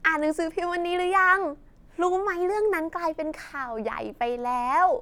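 No technical faults can be heard in this recording.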